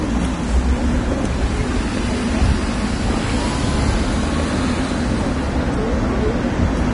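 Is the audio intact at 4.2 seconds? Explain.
No. At 4.2 seconds, as throughout, the treble is hissy and grainy with softened attacks, likely from heavy Vorbis compression at a low bitrate. A spectrogram shows nothing above 10.6 kHz and blotchy upper bands.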